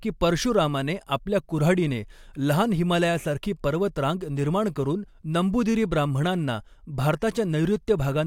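Listening to this speech recording, nothing stood out as a technical problem.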